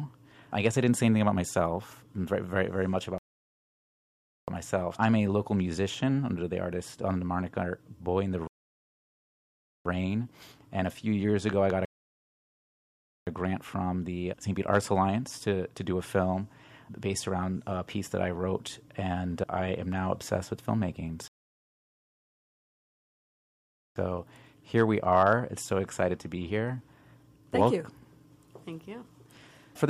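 The sound drops abruptly into silence four times: at 3.18 to 4.48 s, 8.47 to 9.85 s, 11.85 to 13.27 s and 21.28 to 23.96 s. After each gap it picks up exactly where it left off, with nothing skipped. These are rebuffering stalls. The player exhausted its downloaded audio and waited for more data to arrive, adding about 1.3, 1.38, 1.42 and 2.68 s of dead air.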